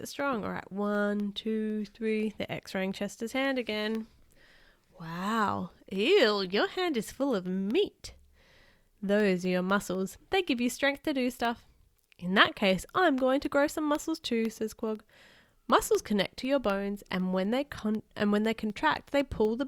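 Speech with regular ticks every 0.25 s from 0.2 s to 19.45 s, about seventy in all. These are periodic USB or driver dropouts, each blanking a fraction of a millisecond with silence.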